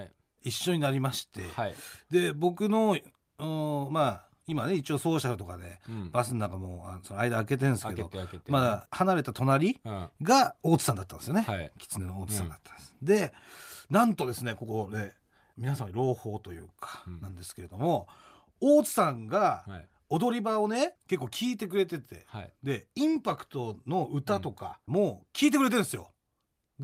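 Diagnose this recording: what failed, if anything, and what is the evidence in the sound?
Listening through the recording, nothing stood out that would point to a failure at any stage of the chain.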